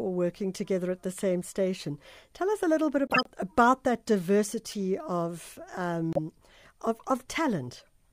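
A corrupt frame decoded after "us a little bit" (3.07–3.27 s, before "about that") gives a loud burst of misplaced energy spanning several frames. A faint error follows at 4.71 s, and a brief one at 6.13–6.17 s. Unlike dropouts or concealment, this adds misplaced energy instead of repeats.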